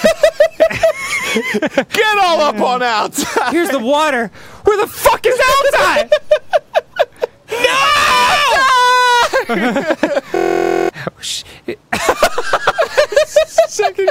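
At 10.36 s a system hang loop froze the machine while the hardware replayed one 23.2 ms buffer, consistent with 1024 samples, giving a 43.1 Hz buzz until 10.89 s.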